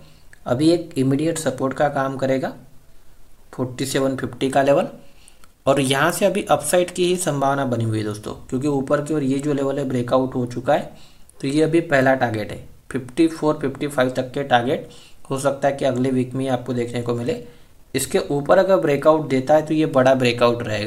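From 0.57 to 1.33 s the sound runs about 5.5% fast and 92 cents sharp, then snaps back, likely a drift correction step from clock-matching software.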